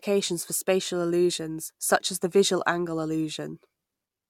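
Nothing stood out on listening to this speech recording.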